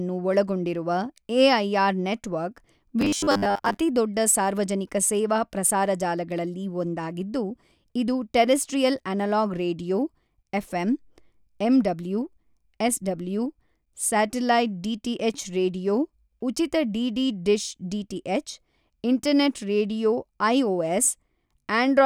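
From 3.01 to 3.77 s, after "ಒಳಗೊಂಡಿರುವ ಎಐಆರ್ ನೆಟ್ವರ್ಕ್", there is robotic sound from repeated short buffers. Speech becomes a rigid metallic buzz at 100 Hz, likely from a 10 ms slice replayed while most real audio is skipped. A spectrogram shows flat harmonics spaced 100 Hz apart, and the waveform shows identical 10 ms blocks.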